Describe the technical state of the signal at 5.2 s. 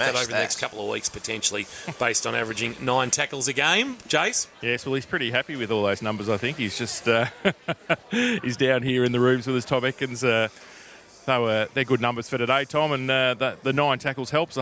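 At 5.2 s the signal is intact, with no dropout, clipping, glitch or other fault audible at that point.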